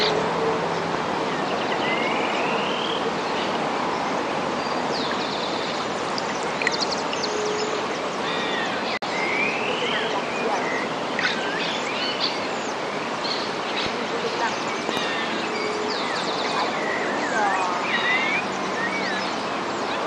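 Right at the start, from 0.95 to 0.97 s, there's a loud pop, a single sharp hit roughly 15 dB above the surrounding audio, with the sound carrying straight on underneath. That kind of spike is likely a voltage step or pulse getting into the chain, from a plug, a switch, static or a driver hiccup, and the circuitry after it shapes it into that brief thump.

At 8.97 to 9.02 s you get a gap at a join of encoded pieces. The continuous sound just drops out for about 50 ms with smeared edges, then resumes from where it left off. That's what happens when separately encoded chunks are butted together untrimmed: the encoder's start-up delay and the padding on the last frame both end up as silence in the middle.

The pops come back later. There's a single one at 13.86 to 13.88 s, a bit softer at roughly 10 dB over the signal. Then from 14.89 to 14.99 s there's a double pop, two quick hits peaking roughly 15 dB up, which sounds like a pulse and a second kick right behind it. 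These likely have the same cause as the first pop.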